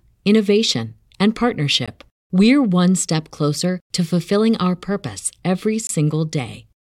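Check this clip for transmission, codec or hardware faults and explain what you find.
Two gaps between stream segments interrupt the speech. At 1.86 s, between "innovation and" and "we're one step closer", a hard-edged silence of about 17 ms appears. The second, lasting about 22 ms, runs from 5.87 to 5.89 s, right after "fulfilling our purpose every". The segments appear to be 4 s long, and each gap falls at a boundary where the timestamps of adjacent segments don't meet, so the player inserts silence. Unlike a packet-loss dropout, nothing is missing: the speech resumes exactly where it stopped, only delayed.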